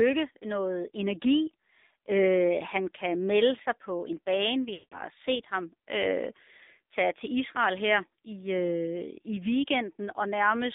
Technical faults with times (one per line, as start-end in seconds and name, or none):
0.00-10.75 AMR narrowband mobile codec
4.74-5.01 lost AMR speech frames